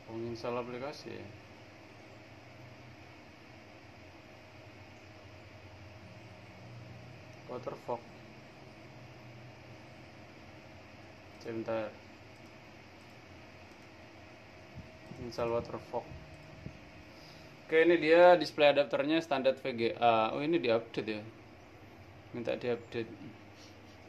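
No technical faults can be heard anywhere in the audio.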